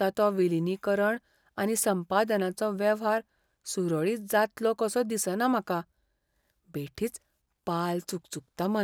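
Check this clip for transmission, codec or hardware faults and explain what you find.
Nothing stood out on listening to the speech in this clip.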